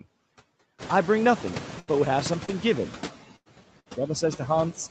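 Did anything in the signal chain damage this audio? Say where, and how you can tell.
Yes. The call's noise suppressor, in the call processing stage, pulls down what it judges to be steady noise by about 14 dB, frame by frame, across the whole clip. The room noise that rises around 1 s dips between phrases and swells under them.

On the network side, three single lost Opus packets were rebuilt from the low-bitrate copy carried in the following packet, at 1.47–1.49 s, 1.87–1.89 s and 2.48–2.50 s. Each 20 ms patch plays without a gap but sounds rougher and noisier than the surrounding audio.

Three bursts of packet loss hit at 1.79–1.89 s, 3.36–3.48 s and 3.80–3.88 s, losing about 80, 100 and 60 ms. The jitter buffer extends the last sound and fades it, giving a held buzz or dying hiss, and the audio then resumes with that stretch missing.

A short concealed packet loss at 2.45–2.50 s drops about 20 ms. 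The decoder bridges it by continuing the preceding sound for roughly 27 ms before blending back, which is heard as a brief smear or wobble. Its tail overlaps the error-corrected frame at 2.48 s.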